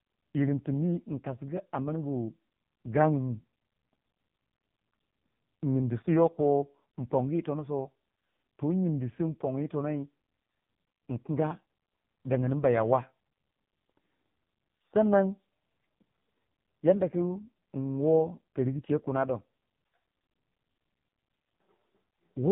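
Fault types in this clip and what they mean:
AMR narrowband mobile codec: The speech sounds buzzy, thin and synthetic throughout, with nothing above 3.8 kHz. The codec rebuilds each 20 ms frame from a vocal-tract model and a few pulses, and damage this heavy points to one of its lowest modes, around 5 kbps.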